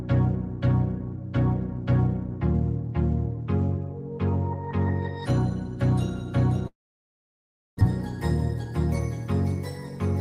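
From 6.67 to 7.83 s the sound cuts out: a brief fading buzz or hiss, then about a second of silence, and it resumes with roughly a second missing and sitting around a tenth of a second later. That's likely a long network dropout.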